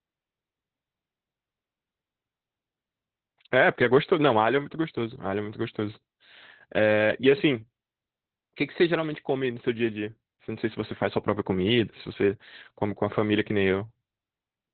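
The speech runs through Opus voice compression for its whole length, with nothing above about 4.3 kHz, so it sounds muffled and narrowband. The SILK linear-prediction coder is clearly at work: the voice turns hoarse and faintly robotic because the excitation is coded so coarsely, which fits a setting near 8 kbps. A simple low-pass filter would dull the sound without that buzzy, synthetic roughness, and an MP3-style codec would swirl rather than rasp.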